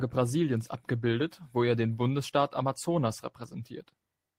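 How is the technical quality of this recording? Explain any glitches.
No glitches or faults heard.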